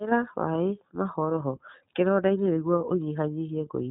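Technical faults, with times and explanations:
Throughout, iLBC codec: the speech has nothing above about 3.9 kHz and sounds plainly rough and synthetic. Each frame's excitation is coded independently, at what fits 30 ms frames at 13.33 kbps, so the excitation is coded coarsely and the harmonic texture coarsens.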